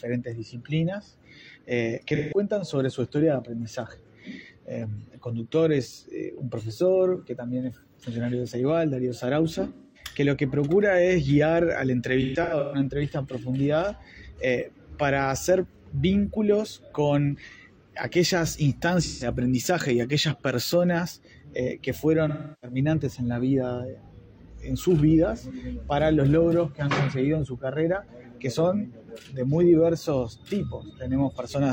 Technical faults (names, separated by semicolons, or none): AAC frame loss with concealment